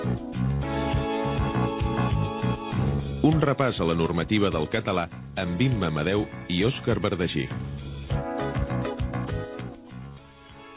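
Nothing stood out on listening; the audio comes through a phone-style call path with nothing audible above about 4 kHz, and no moment calls for comment.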